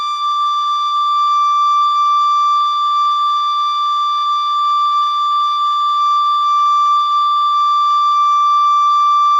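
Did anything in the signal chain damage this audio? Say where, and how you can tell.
No, the signal chain left no audible damage here.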